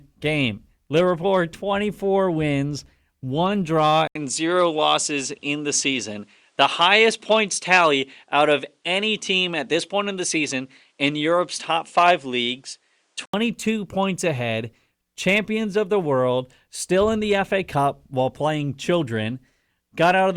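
Input switched to a poorer device from 4.07 to 13.34 s: after an 80 ms gap, the speech loses everything above 10.5 kHz and picks up a faint new noise floor while loudness stays the same, likely because capture moved to another microphone.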